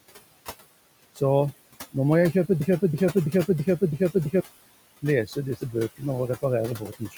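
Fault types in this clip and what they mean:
Noise suppressor artifacts, throughout: The room noise, sitting about 17 dB below the speech, is pulled down by about 19 dB in each frame the suppressor judges to be noise only, then lets up once speech returns. So the background dips in the gaps and swells back under the talking.
Broken-record loop, 2.60 to 4.40 s: A single 330 ms fragment plays five times back to back, each pass identical, so the audio sticks and stutters like a skipping record instead of moving forward. The most likely cause is a stall in the player, encoder or stream that kept resending the last fragment it held. Whatever should have been heard during those 1.8 seconds is lost rather than delayed.
Speech cut by the noise suppressor, 6.77 to 7.17 s: In the final moments of the clip the suppressor misreads part of the speech as background and turns it down along with the noise, by about 15 dB at the deepest point. 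Roughly a fifth of a second of speech is affected across that stretch, so quieter sounds and word endings there come out swallowed and faint.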